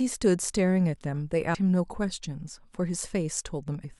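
A speech clip with damaged data in a compressed stream: a brief blip at 1.53 s and another from 3.83 to 3.86 s, where the decoder loses sync.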